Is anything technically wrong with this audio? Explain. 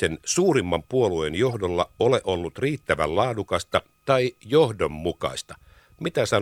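Yes. A corrupt frame decoded occurs twice in this speech: from 1.49 to 1.55 s, between "suurimman puolueen" and "ole ollut riittävän", spanning a few frames and peaking around -25 dBFS, and again from 3.72 to 3.74 s, just after "ole ollut riittävän", about two frames peaking near -30 dBFS. Flipped bits made the decoder misread gains and codes, so it placed energy at the wrong frequencies, heard as a short chirp, squeak, blip or burst of noise. Lost-packet concealment would instead produce muffled or repeated sound.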